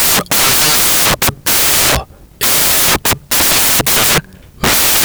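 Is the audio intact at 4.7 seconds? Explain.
No. At 4.7 s the speech is still buried under the fault that runs through the whole clip: samples built from the wrong bytes. Each sample's bytes are being combined in the wrong order or alignment, so the rapidly changing low bits land in the most significant position and swamp the real signal with loud, harsh broadband noise. Unlike steady added hiss, this noise follows the signal itself.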